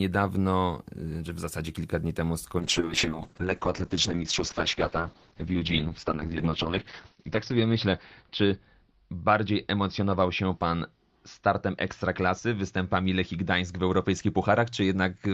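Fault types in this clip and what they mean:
Call bitrate drop: from 2.6 s to the end, the speech loses its top end and turns coarse and watery. The call's bandwidth estimate fell, so the encoder was pushed from about 32 kbps down to about 7 kbps, holding that floor for roughly four and a half seconds. With so few bits the codec quantises the signal more crudely and narrows its audio band from 20 kHz to 6 kHz, giving the muffled, rough texture heard through the rest of the clip.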